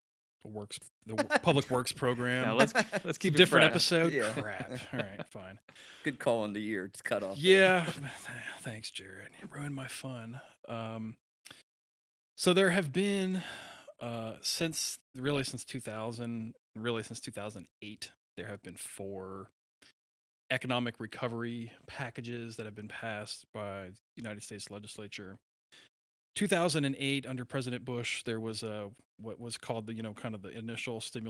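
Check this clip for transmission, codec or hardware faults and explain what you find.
Nothing stood out on listening to this speech clip that would point to a transmission, codec or hardware problem.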